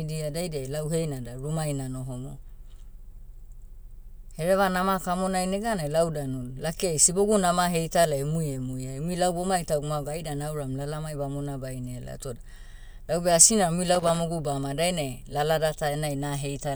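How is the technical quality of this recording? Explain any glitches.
The recording has one glitch, a loose connector crackle. It runs from 13.95 to 14.21 s, between "naram umui" and "baoma dainai lalada". A worn or dirty contact makes and breaks rapidly, chopping the signal. The result is a short, irregular burst of scratchy crackle.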